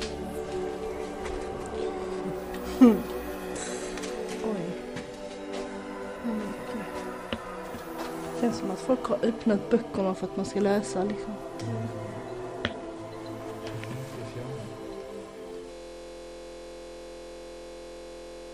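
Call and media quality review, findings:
System hang loop from 15.72 s to end: a 23.22 ms slice repeats exactly about 120 times, giving a steady buzz at 43.1 Hz. Probable component: host or audio driver stalled while the output hardware kept replaying its ring buffer, which fits a 1024-sample buffer. Waveform shows an identical short block tiled edge to edge; spectrogram shows frozen content as evenly spaced vertical striations at 43.1 Hz, no change over time.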